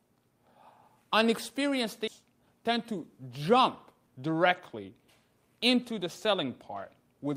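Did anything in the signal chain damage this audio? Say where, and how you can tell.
Yes. There is a skip ahead at 2.07 to 2.09 s, at the network and jitter-buffer stage. The sound jumps forward with no gap and no fill. Roughly 0.4 s of material is missing, and the two sides are butted almost directly together. A stretch was dropped in transit, or discarded when the buffer overflowed with later audio already queued. Playback then resumed from the newer data, shortening the delay by about the same amount.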